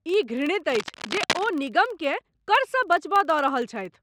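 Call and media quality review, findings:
Filter restarted on every block, throughout: ticking buzz at 21.5 Hz tracking speech level. Filter state reset per block, which fits a 2048-sample block size.

Cable scratch noise, 0.72–1.47 s: dense uneven rustling bursts, nearly as loud as the speech. Likely a worn cable or connector changing contact resistance.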